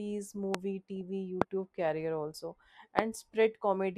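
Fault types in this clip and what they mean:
Loud pop: Three sharp single pops, about 25 dB above the speech, at 0.55, 1.42 and 2.99 s, each around 20 ms long, with the speech carrying on underneath. The likely cause is a sudden voltage pulse, such as static or a switch glitch.
DAB burbling: A brief patch of short noise blips from 0.96 to 1.01 s, each confined to a single frequency band, over the speech. Weak reception let a small fraction of bit errors, about 0.1%, slip past error correction, corrupting samples across six frames.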